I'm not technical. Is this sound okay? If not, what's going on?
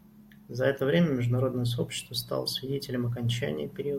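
Yes, nothing in this recording stood out as a problem when I listened to it.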